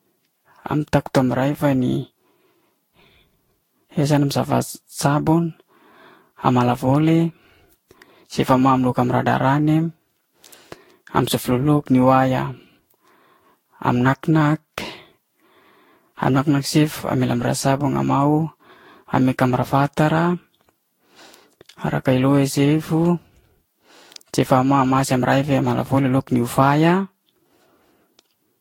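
The speech clip has generation loss throughout. It sounds swirly, smeared and hollow, and attacks blur. There is nothing above 16.7 kHz. The damage is heavier than a single encode at this rate would leave. The likely cause is repeated lossy re-encoding, around seven passes, which fits a Vorbis chain near 60 kbit/s. Each pass quantises again on a shifted frame grid. The noise and spectral holes stack up.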